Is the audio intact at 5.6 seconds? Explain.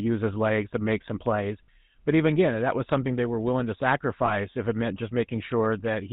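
No. At 5.6 seconds the speech carries GSM full-rate codec damage, present throughout. Nothing passes above 4 kHz, and the sparse pulsed excitation sounds buzzy and gravelly.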